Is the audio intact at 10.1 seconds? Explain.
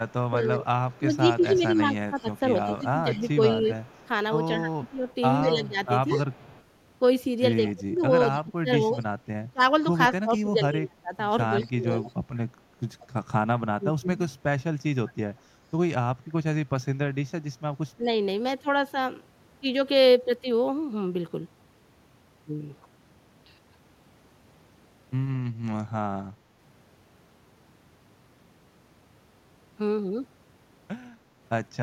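No. From 0.08 to 13.06 s there is an echo leak: the far end's echo canceller likely let through part of what its microphone picked up from the loudspeaker, so a faint copy of the speech returns about 181 ms late, roughly 25 dB below the direct voice.

Overlapping that, from 7.74 to 12.04 s, speech is suppressed in double talk: with both sides speaking, the canceller likely mistook the talker for echo and attenuated both, so the voice dips by up to around 20 dB or drops out in pieces, about two seconds in total.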